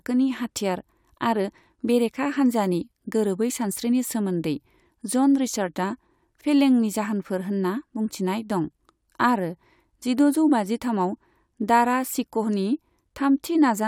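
No technical faults can be heard anywhere in this speech recording. There is nothing in the audio that needs a time marker or an explanation.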